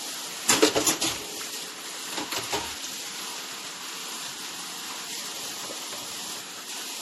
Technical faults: generation loss

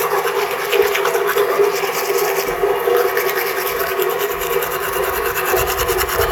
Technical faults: none

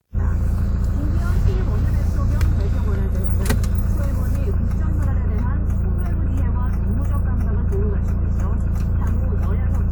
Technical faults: none

